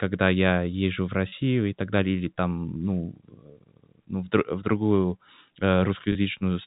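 Packet loss with pitch repetition at 1.29–1.32 s, between "я езжу в" and "и так далее или", and again at 6.12–6.15 s. Each 30 ms gap, which fits a single lost packet, is bridged by repeating the last pitch period, heard as a brief held, buzzy tone inside the narrowband telephone-coded speech.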